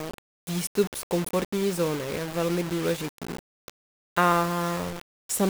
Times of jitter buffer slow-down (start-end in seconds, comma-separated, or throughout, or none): none